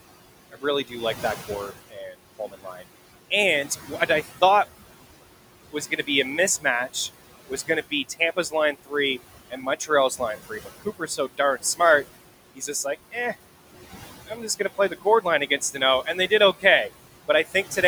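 Noise suppressor artifacts run through the whole clip. The room noise, sitting about 15 dB below the speech, is pulled down by about 17 dB in the pauses and comes back up under each phrase, so the background pumps with the talking rather than staying steady.

Speech cut by the noise suppressor differs from that pumping: here the speech itself, not the background, is turned down. It happens between 0.52 and 2.84 s (dips of up to about 17 dB, roughly half a second in total), 3.87 to 4.42 s (about 9 dB, about a tenth of a second), 5.72 to 13.15 s (up to about 17 dB, about a second) and 14.27 to 17.77 s (up to about 14 dB, under half a second), where quiet parts sound swallowed.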